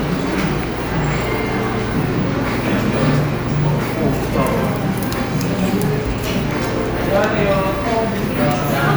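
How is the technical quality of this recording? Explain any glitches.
The technical quality of this recording holds up, with no glitches to explain.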